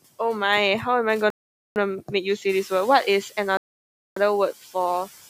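From 1.30 to 1.76 s, a Bluetooth stall, likely interference delaying packets until the headphone buffer ran empty, drops the speech into about 0.46 s of silence before it continues. From 2.49 to 2.82 s, the noise suppressor is catching up: when the room noise jumps by about 11 dB at around two and a half seconds, the suppressor's noise estimate trails behind, so the noise passes through with less reduction at first and then sinks by about 6 dB over 330 ms. A second stall from 3.57 to 4.17 s cuts the speech to about 0.59 s of silence.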